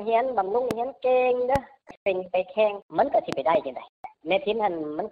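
Loud pops break through the sound at 0.71–0.73 s and 1.56–1.58 s, with a double pop spanning 3.33–3.57 s. Each peaks around 15 dB above the signal while the audio continues underneath. These are likely voltage transients from a switch, plug contact or static discharge.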